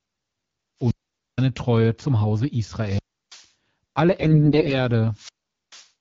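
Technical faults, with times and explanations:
0.79 to 5.88 s, wireless microphone squelch dropouts at 0.79–1.47 s, 2.76–3.48 s and 5.11–5.88 s: three times the radio link from the analogue FM microphone fades far enough that the receiver's squelch shuts the output off. Each one sounds like a quick swell of hiss or static, then a hole of near silence lasting about 0.47 s, 0.33 s and 0.44 s, before the speech comes back.
4.19 to 4.76 s, AMR bit errors: over a weak stretch of the mobile link, about one bit in ten is corrupted in the less protected parts of the AMR wideband frames, while the core bits still pass their check, so the decoder plays the frames instead of discarding them. The excitation pulses land in the wrong places and the fine pitch, gain and spectral values are off. The speech keeps roughly its pitch and level but turns hoarse, scratchy and gargly for just over half a second, which fits a run of about 26 damaged 20 ms frames. 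The 12.65 kbit/s AMR-WB coding underneath is what would otherwise carry the speech cleanly.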